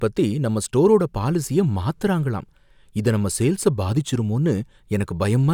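No technical faults are audible anywhere in the speech recording.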